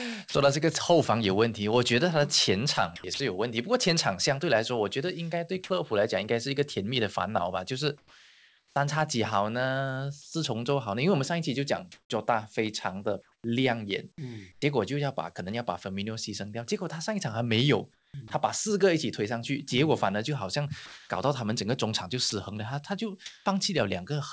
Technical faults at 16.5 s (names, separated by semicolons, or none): none